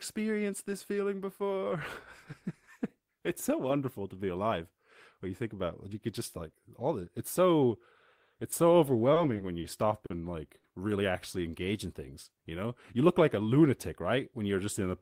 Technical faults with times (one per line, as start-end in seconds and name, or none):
9.14-9.67 short stall from a late packet
10.06-10.13 short stall from a late packet
10.58-10.67 short stall from a late packet